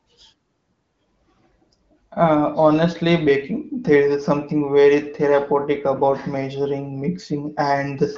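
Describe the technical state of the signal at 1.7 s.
At 1.7 s the speech is intact, carried cleanly through AMR wideband (HD Voice) coding at 15.85 kbit/s with its band stopping at about 7.5 kHz.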